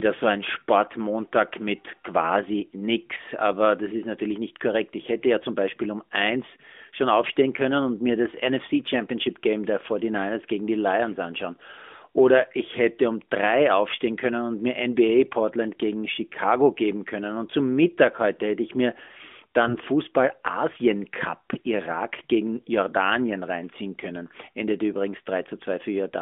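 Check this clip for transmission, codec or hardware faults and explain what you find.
There are two short bursts of AMR bit errors in this narrowband AMR mobile speech, which carries the usual 200 Hz to 3.5 kHz phone band.

The first runs from 7.24 to 7.36 s, between "um eins schon" and "können und mir das". The second runs from 19.60 to 19.85 s. Their lengths fit about six and twelve 20 ms frames. Errors in the weakly protected bits misplace the excitation pulses and skew the fine pitch, gain and spectral values, so the voice holds its pitch and level but goes briefly hoarse, scratchy and gargly.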